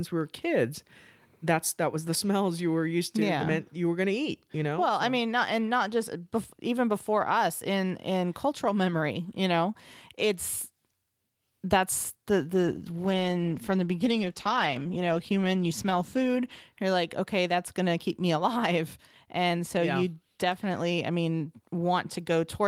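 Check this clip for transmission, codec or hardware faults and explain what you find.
One fault: a call bitrate drop from 12.54 to 16.67 s, between "that's the" and "you're like okay that's". The encoder was forced onto far fewer bits, which fits a fall from 32 to about 13 kbps held for roughly four seconds. It codes the speech coarsely, so the sound turns rough and watery until the rate recovers.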